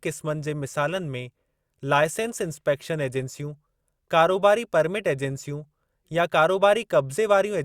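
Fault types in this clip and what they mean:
No technical faults can be heard in the speech; the signal level, bandwidth and continuity stay steady throughout.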